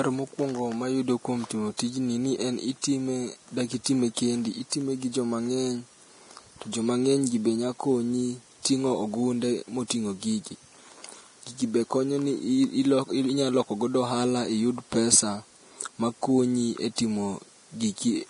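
Heavy lossy coding, most likely Vorbis compression at a low bitrate around 32 kbps, runs through the whole speech clip. Nothing survives above 10.6 kHz, and the treble that remains has been quantised so coarsely that its fine detail has turned into noise. The top end sounds hissy and grainy, voiced tones have a roughened edge, and consonant onsets lose their crispness.

The same block-based coding causes pre-echo three times, each smearing about 20 ms ahead of a sharp onset. Because the codec spreads quantisation noise sized for the loud attack across the whole block, the quiet moment before it fills with hiss. This happens at 1.77 to 1.79 s, after "mokwongo mayudo kuom timo" and before "tijni ni en"; at 2.82 to 2.84 s, after "timo tijni ni en"; and at 3.84 to 3.86 s. Each time a brief wash of hiss precedes the attack, which sounds softened and blurred.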